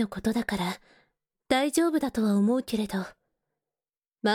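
No technical faults are audible.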